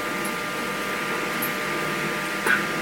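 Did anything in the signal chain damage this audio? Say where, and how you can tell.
Yes. Throughout, the sound runs at double speed and an octave high. That points to a wrong sample rate at playback, consistent with 22 kHz material played at 44.1 kHz.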